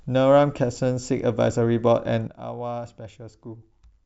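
Speech recording with a sudden gain jump at 2.27 s: the level drops by about 12 dB in a single step and stays there to the end, with the background noise falling along with it. The likely cause is a digital gain change applied without a ramp.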